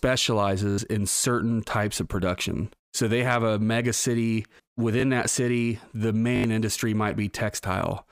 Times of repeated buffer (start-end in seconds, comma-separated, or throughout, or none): 0.70-0.78, 5.00, 6.36-6.44